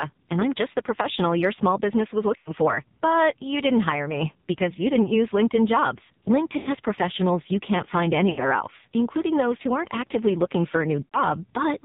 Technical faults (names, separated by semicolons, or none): AMR narrowband mobile codec; lost AMR speech frames